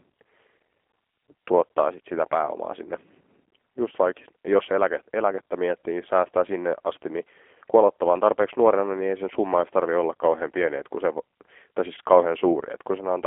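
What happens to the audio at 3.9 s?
At 3.9 s the speech is passing through a G.729 codec, as it does for the whole clip. Instead of keeping the waveform, the coder models each short frame with a vocal-tract filter, a pitch predictor and a few sparse pulses, which fits a low 8 kbit/s stream. Nothing above 3.5 kHz survives, and the line band sits around 300 Hz to 3.4 kHz. The result is thin, plainly rough and synthetic-sounding speech.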